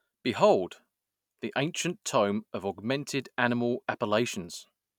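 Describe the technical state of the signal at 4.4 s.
At 4.4 s the signal is intact, with no audible fault of any kind at that moment.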